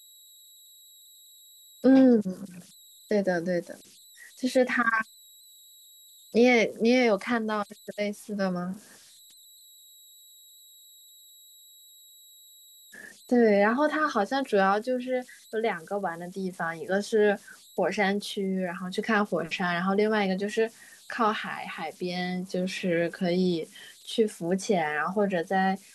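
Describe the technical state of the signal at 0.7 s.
At 0.7 s the speech carries converter idle tones, present throughout the clip. An undithered delta-sigma converter settles into repeating bit patterns on small inputs. These produce a faint whistle around 4 kHz, about 29 dB below the signal, with grainy noise beneath quiet passages.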